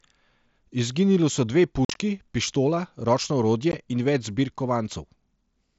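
Speech over what sounds like an mSBC headset link, with unconcealed Bluetooth headset packet loss: choppy holes from 1.85 to 1.96 s, between "so dve" and "pištola ročno", then a brief 15 ms hole at 3.72 s after "pištola ročno".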